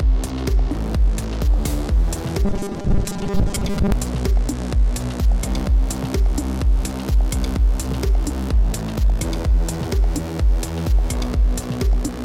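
From 2.45 to 3.92 s, the sound turns robotic, a rigid metallic buzz at 200 Hz. This is likely a buffer underrun, where a 5 ms slice is looped while fresh audio lags. About half the sound is repeated instead of played.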